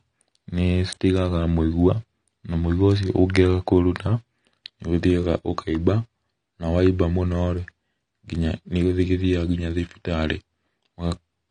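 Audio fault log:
Throughout, AAC compression: the speech sounds dull and smeared, with a warbling, fizzy texture on sibilants and held sounds, and nothing at all above 9.7 kHz. The likely cause is AAC-LC coding at a low bitrate, one that fits around 32 kbps. With so few bits, the encoder drops the top of the spectrum, quantises the remaining frequency lines coarsely against its hearing model, and leaves gaps or noise-filled bands that shift from frame to frame.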